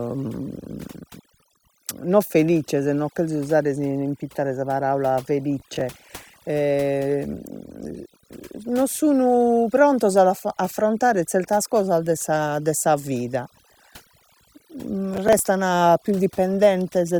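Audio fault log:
throughout: overdone noise removal. The noise reduction is pushed so hard that frequency bands near the estimated noise floor are pulled down or switched off, taking quiet parts of the speech with them, so pauses sink to near silence with twinkling specks.
5.60–5.81 s and 15.14–15.39 s: processor overload crackle. Straight after "si impittare sa paraula", and again later, a run of several missed processing deadlines, with buffers of roughly 10 ms, leaves stale audio replayed with hard edges, heard as a short burst of gritty crackle lasting about a fifth to a quarter of a second.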